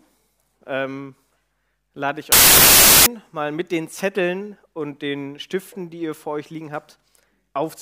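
From 2.32 to 3.06 s there is a wrong sample width fault. The bytes are being split at the wrong boundaries, which fits packed 24-bit data read as 16-bit, so the sound turns into loud noise with the original buried underneath, playing at 0.667 times speed with a lowered pitch.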